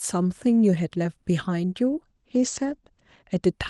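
At 2.06 s a call bitrate drop sets in and lasts to 3.49 s. The encoder is starved of bits and codes far more coarsely, which fits a fall from about 48 to 12 kbps. The top narrows from 12 kHz to 8 kHz. The speech turns rough and muffled, bottoming out for about 1.2 s.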